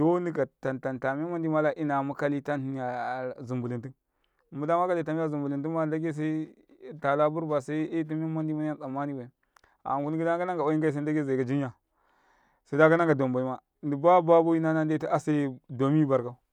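Speech recording, with nothing technically wrong with it.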